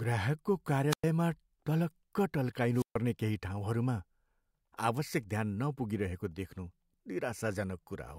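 Wireless microphone squelch dropouts hit this speech at 0.89–1.04 s and 2.73–2.98 s, each a hiss swell then a silent mute (about 105 and 136 ms) as the receiver squelch closes.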